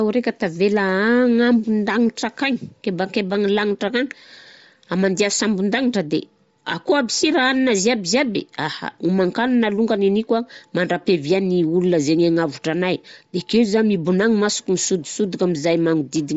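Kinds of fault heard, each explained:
Bluetooth LC3 compression: the speech runs through the whole clip with a breathy, grainy edge and nothing above about 7.7 kHz, likely from LC3 at a low rate, which fits 32 kbps with 10 ms frames, so the top end gets zeroed and noise-filled.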